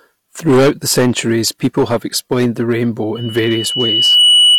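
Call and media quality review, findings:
Hard clipping, whole clip: harsh fuzz on every loud syllable, peaks sliced flat. The input stage or converter is overdriven by about 14 dB, with roughly a tenth of samples pinned at the converter's limit. Flat tops spray high harmonics. Probably gain staging upstream of the ADC.

Loudspeaker feedback squeal, 3.15 s to the end: a steady 3 kHz tone swells over about a second until it sits louder than the speech. The mic is hearing its own loudspeaker, and loop gain tops unity at 3 kHz. Check the monitor level and mic placement.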